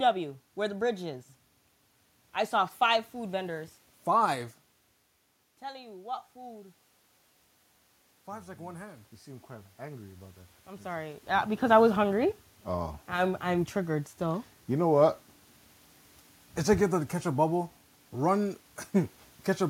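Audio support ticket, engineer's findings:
Automatic gain rising, 8.26–11.3 s, before "because I was hungry": AGC lifts gain about 6 dB after an input drop of about 14 dB. Voice and room noise swell together; level only partly recovered.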